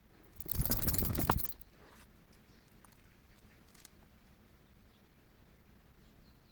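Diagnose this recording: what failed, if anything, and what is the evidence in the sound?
The failure sits at the codec stage. Across the whole clip the sound is grainy and rough, with tonal parts breaking into noise, and the damage is plainly audible. That texture is likely Opus compression. At a bitrate that fits roughly 16 kbps, bands the encoder cannot afford to code exactly are filled with folded or noisy content. The hoarse quality suggests its hybrid mode, while full bandwidth is retained.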